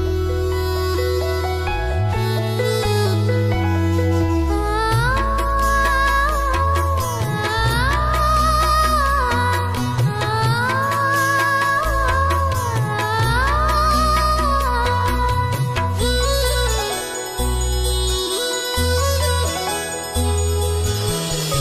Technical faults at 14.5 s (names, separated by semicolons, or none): none